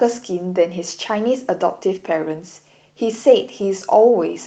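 Nothing stood out on listening to this speech recording.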